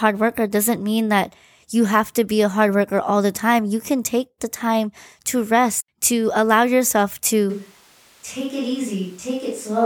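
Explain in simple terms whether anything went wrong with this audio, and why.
Something does go wrong near the end. At 7.50 s, right after "rest to allow yourself", the speech suddenly turns roomy and hollow, with less bass, and it stays that way to the end. It also drops somewhat in loudness, and the background room noise becomes easier to hear. This is a switch to a distant microphone. The close microphone's signal was most likely lost, leaving only a mic placed farther away that picks up more of the room.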